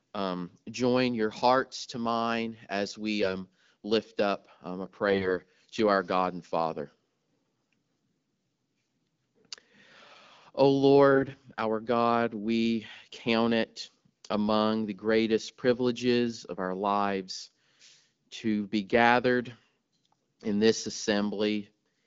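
At 3.23 to 3.34 s, between "to mine as we" and "lift up um a", the voice briefly goes hoarse and scratchy. These are AMR bit errors: flipped bits in the weakly protected parts of the frames misplace the excitation pulses and skew the pitch, gain and spectral detail, while pitch and level roughly hold. It recurs, worst, at 5.08 to 5.33 s before "to our", turning properly gargly, then more mildly at 11.12 to 11.37 s, all over clean wideband speech.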